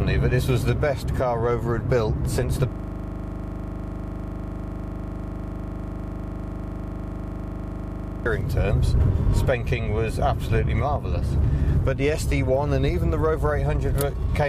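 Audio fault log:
2.72–8.26 s, system hang loop: the computer or its audio driver stalled and stopped supplying new audio, while the sound hardware kept replaying the last 40 ms fragment in its ring buffer. That single slice repeats exactly, well over a hundred times, at a rate of 25 Hz. At that rate it is heard as a coarse, rattling buzz rather than a distinct stutter, frozen on one instant of sound until playback resumes.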